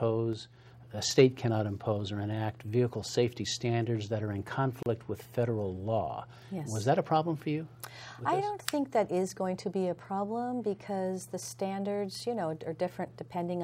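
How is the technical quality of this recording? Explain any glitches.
The recording has two distinct glitches, one near the start and one just before the five-second mark.

At 0.33 s there is a sudden gain jump. The level drops by about 4 dB in a single step and stays down until 0.66 s, where it jumps back up. There is no fade on either edge. The background noise falls and rises along with the sound. This points to a change in digital gain between adjacent samples. The likely cause is a gain setting applied without a smoothing ramp.

At 4.83 s there is a gap at a join of encoded pieces. The sound stops for about 34 ms, then resumes where it left off. The edges are smeared. This happens when sections are encoded separately and joined untrimmed. Each encoder pass leaves start-up delay and end-of-frame padding in place, and that padding becomes an audible hole in otherwise continuous sound.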